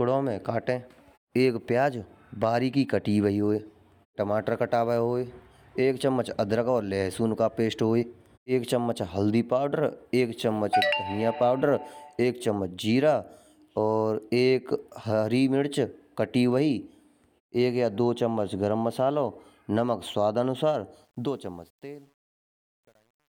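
Right after "मसालो नमक स्वादानुसार", at about 21.05 s, the speech fades out, and the fade runs to the end at 23.4 s. It carries truncation distortion, though. The gain stage keeps too few bits and adds no dither, which fits something like 9-bit resolution. From about 21.73 s to the end the tail turns gritty and steppy instead of tapering off cleanly.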